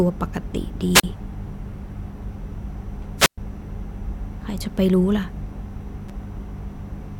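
At 0.93 to 1.04 s and 3.17 to 3.38 s, wireless microphone squelch dropouts occur: the radio signal fades, hiss rises, and the receiver mutes for about 37 ms, then about 117 ms. At 6.09 s, a repeated buffer plays a 5.33 ms slice, consistent with a 256-sample buffer, three times as a click or brief buzz, replacing roughly 10 ms of audio.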